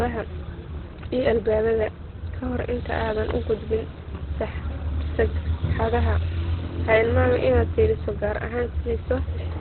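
Across the whole recording, the speech is band-limited, with nothing above about 4.2 kHz, and sounds muffled and hoarse, with heavy codec damage. The likely cause is Opus compression running in its SILK speech mode at narrowband, which points to a bitrate around 12 kbps. At that rate the encoder discards the upper spectrum and models the voice coarsely, so sibilants lose their edge and vowels take on a dull, rasping texture.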